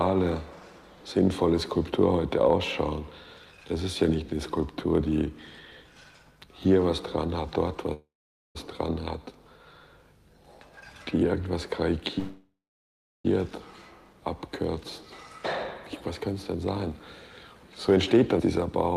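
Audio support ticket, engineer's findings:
Call audio freeze, 7.93–8.57 s and 12.19–13.26 s. Sound stops, then a brief fading buzz ends in silence (0.48 s, then 0.72 s). Audio resumes where it stopped, so nothing is lost but latency grows 0.62 s and 1.06 s. Likely delayed packets draining the jitter buffer.

Jitter buffer speed-up, 16.56–16.99 s and 17.88–18.36 s. Audio runs hurried at unchanged pitch, 107% and 108% speed. Receiver trimmed short pitch-period chunks, around 40 ms and 50 ms in total, to shrink the buffer back to target.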